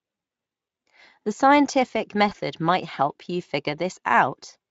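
At 2.29 s the speech briefly smears into a short buzzy tone or coloured noise that decays rather than cutting to silence, with the voice sounding thin and a little distorted until about 2.34 s. This is VoIP packet loss concealed by the speech codec. About 20 ms of audio went missing, consistent with a single dropped frame. The Speex decoder, which carries the speech with light coding colour, filled the hole by repeating its last pitch and spectral shape at falling gain.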